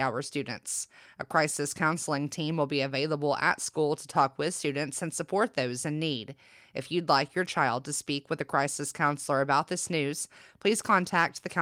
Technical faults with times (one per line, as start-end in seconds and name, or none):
none